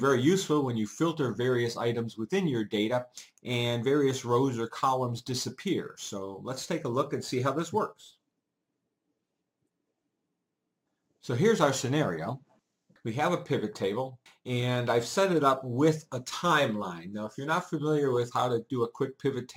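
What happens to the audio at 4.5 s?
At 4.5 s the sound carries crude rate conversion, and it is present through the whole clip, not just at that moment. Samples were simply repeated to stretch the stream to a higher rate, with no filtering. The pattern fits a change from 44.1 kHz to 48 kHz. The repeats create shifted, inharmonic copies of the content, roughly 30 dB below it. They come through as a gritty, inharmonic fizz riding on louder and brighter passages.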